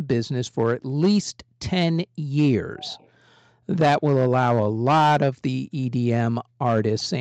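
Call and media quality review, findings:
Echo leak, 2.80–3.09 s: faint delayed copy of the speech, roughly 25 dB down, trailing by 394 ms. Likely the far end's echo canceller letting loudspeaker pickup through.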